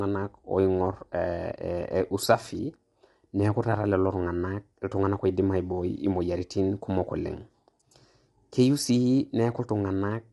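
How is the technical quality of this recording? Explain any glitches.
The recording suffers plainly audible codec damage from start to finish.

Low-delay AAC compression, throughout: this is likely AAC-ELD, whose very short frames resolve pitch harmonics poorly and run short of bits at a rate that fits about 32 kbps. The speech sounds rough and grainy, with noise between harmonics and nothing above 11.7 kHz.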